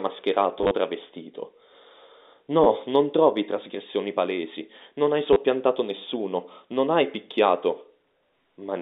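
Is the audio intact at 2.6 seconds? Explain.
No. Packet loss with last packet repeated struck from 2.64 to 2.66 s, just before "non trovi trasgressioni palesi": 20 ms of audio was replaced by a repeat, heard as a brief robotic stutter.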